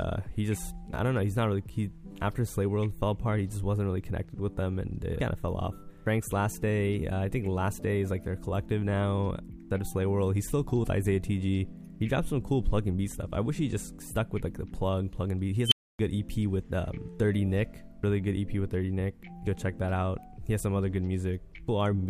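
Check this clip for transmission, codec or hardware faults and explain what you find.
One fault is present. Unstable filter, 15.66 to 15.99 s: runaway feedback in a recursive filter swells a tone near 3 kHz to clipping within 53 ms, then overflow leaves 0.28 s of silence.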